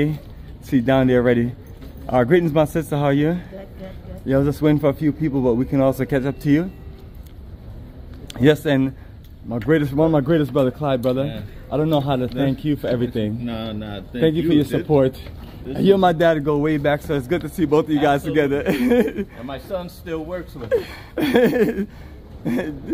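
No technical faults are audible.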